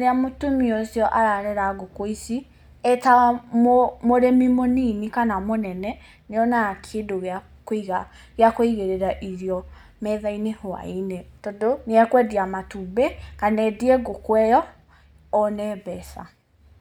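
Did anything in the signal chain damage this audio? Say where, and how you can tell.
No, no signal chain damage.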